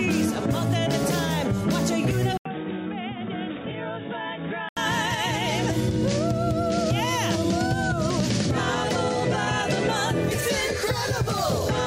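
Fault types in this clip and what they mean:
Input switched to a poorer device: from 2.37 s to 4.77 s the sound turns dull and noticeably quieter, then clears again, most likely because recording moved to a lower-quality microphone or headset call profile and back. On a spectrogram, everything above 3.8 kHz vanishes for that stretch, and a different faint noise floor appears well below the signal. The waveform shows an 80 ms gap at the switch and envelopes shrinking by roughly 10 dB.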